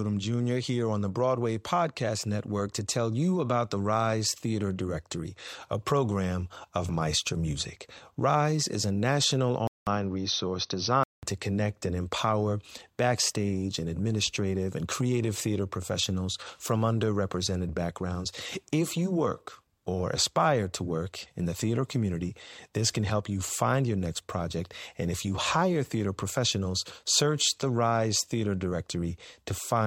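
From 9.67 to 11.23 s, after "is a national", the input likely switched to a poorer device: a 0.19 s waveform gap, then duller sound, with the spectrogram empty above 6.2 kHz.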